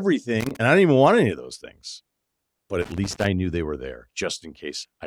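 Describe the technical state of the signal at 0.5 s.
A loose connector crackle is under way at 0.5 s, running from 0.4 to 0.56 s: a worn or dirty contact is making and breaking as it moves, chopping the speech signal and adding pops from any DC on the line, heard as an irregular burst of scratchy crackle.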